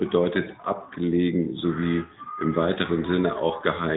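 It's a short speech clip run through an AMR narrowband mobile codec from start to finish. Nothing gets through above about 3.8 kHz, so it has that closed-in phone-call sound, and the codec damage is plainly audible throughout. That comes from AMR-NB resampling everything to 8 kHz and rebuilding the speech from a vocal-tract model driven by a few pulses every 5 ms. The level of damage fits its 10.2 kbps mode.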